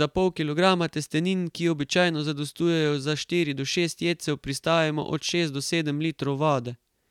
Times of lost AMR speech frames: none

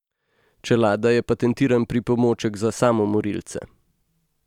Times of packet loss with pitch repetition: none

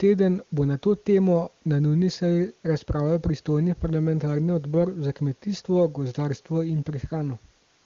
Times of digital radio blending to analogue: none

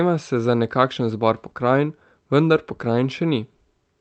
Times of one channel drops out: none

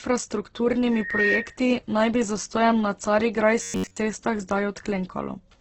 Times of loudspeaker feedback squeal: 0.91-1.60

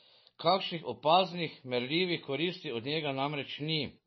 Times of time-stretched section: none

